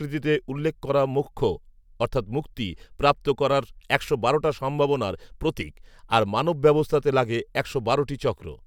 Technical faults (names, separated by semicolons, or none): none